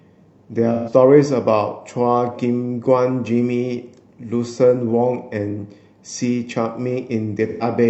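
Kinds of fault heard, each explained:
AAC frame loss with concealment: near 0.74 s and 7.47 s, about 128 ms of speech becomes a smeared, phasey, noisy patch as the decoder rebuilds what fits three lost frames from the last good spectrum. Unlike a plain dropout, it never falls silent.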